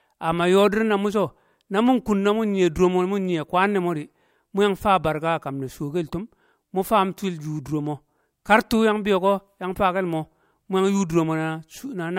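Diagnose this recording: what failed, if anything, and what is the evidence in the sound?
Nothing failed at any stage of this recording.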